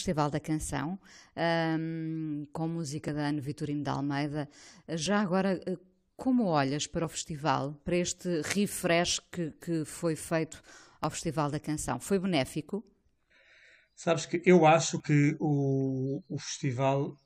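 Overlap between stream segments causes brief skips at 1.10, 3.08, 5.06, 7.04, 9.05, 11.04, 13.02 and 15.00 s, roughly every two seconds. Where the timestamps of adjacent 2-second segments overlap, the player discards about 5 to 17 milliseconds of genuine speech, so the waveform jumps in a tiny skip.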